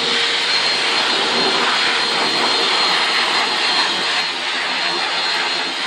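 From 4.21 s to the end at 5.87 s, the audio turns hollow and phasey from channel delay (comb filtering). One channel trails the other by roughly 10 ms, and summing them to mono cancels shared content at evenly spaced frequencies, starting around 40 Hz.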